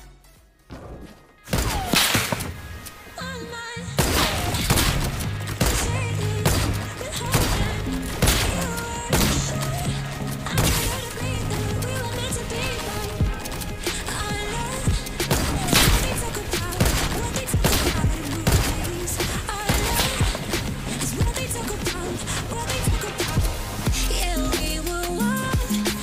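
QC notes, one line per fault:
No faults heard at any point in the clip.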